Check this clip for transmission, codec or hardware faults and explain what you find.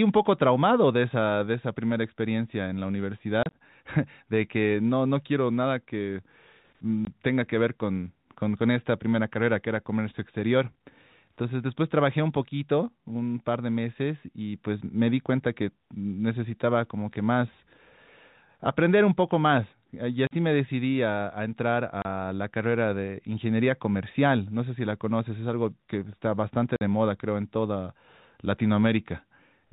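Yes, there is one transmission fault: packet loss filled with silence, occurring five times across the speech. The telephone band limit of the G.711 coding is audible but is not a fault.

Packet loss filled with silence occurs at 3.43–3.53 s (about 60 ms of gaps scattered over 100 ms, longest 30 ms), 7.05–7.07 s, 20.27–20.31 s, 22.02–22.05 s and 26.76–26.81 s. Each sounds like a hard-edged dropout. Lost packets were replaced with silence, and the gap lengths, all multiples of 10 ms, fit 10 ms packets.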